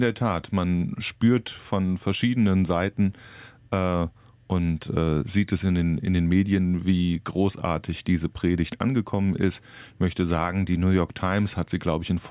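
No technical faults can be heard in this audio.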